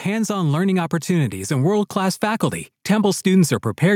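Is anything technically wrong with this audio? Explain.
Yes. From 0.05 to 3.95 s, automatic gain rising lifts speech and background together by about 7 dB, steadily rather than pumping with each syllable like a compressor.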